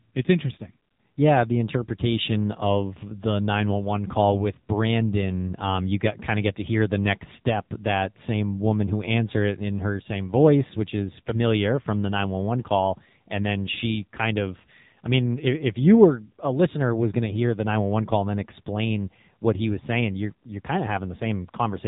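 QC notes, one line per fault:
Throughout, AMR narrowband mobile codec: the speech is confined below 4 kHz and has a plainly audible buzzy, synthetic edge. The codec rebuilds the voice from a vocal-tract model excited by a few sparse pulses, and the coarseness fits a low mode near 7.4 kbps.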